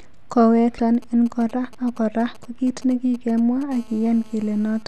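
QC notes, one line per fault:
0.76 to 0.79 s, damaged data in a compressed stream: a brief glitch, about 30 ms long. Corrupted bytes in the compressed stream made the decoder misread those frames, lose sync and hunt for the next valid frame header.
0.95 to 3.63 s, GSM signalling bursts: a galloping dit-dit-dit of short raspy buzzes at 217 Hz, sitting well below the speech, roughly 25 dB down. A nearby 2G phone was sending only brief signalling bursts, which the audio circuitry rectified into sound.
3.72 to 4.83 s, GSM phone buzz: a steady, hard, harmonic-rich rasp at 217 Hz, about 29 dB below the speech and unrelated to it. A nearby 2G phone in a call was transmitting continuously in 217 Hz bursts, and the circuit rectified those radio pulses into audio.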